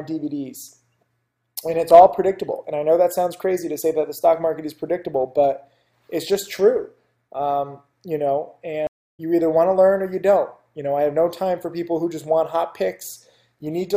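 At 8.87 s the stream connection dropped, and the player reconnected and started a new decoder partway through the stream. The sound cuts to silence for about 288 ms, then picks up again at 9.2 s roughly a third of a second further on, so a short stretch is skipped.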